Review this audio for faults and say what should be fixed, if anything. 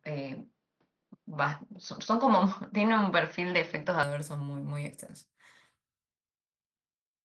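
For the first 4.03 s, the input was likely on a poorer device, a different microphone or a headset's call profile, before it switched back at 4.03 s with no gap. During that stretch the band stops near 6.2 kHz, so the sound is duller and boxier. The level sits roughly 5 dB off the rest, with a faint noise floor far below the signal, before the fuller sound returns. The light Opus voice coding at 20 kbps runs underneath both parts. To prevent this, lock the capture device before recording and disable automatic switching to headset call profiles.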